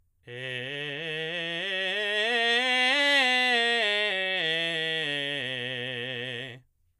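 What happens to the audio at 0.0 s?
At 0.0 s the music begins cleanly, with no dropout, click or other fault at that moment.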